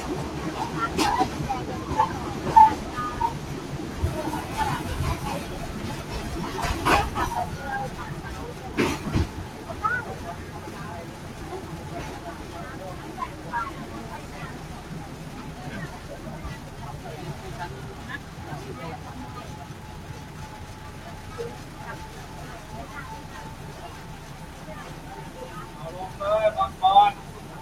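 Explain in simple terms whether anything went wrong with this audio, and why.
Throughout, a noise suppressor applied to sounds treats their steady tones and tails as noise, pulling them down while sharp onsets pass through.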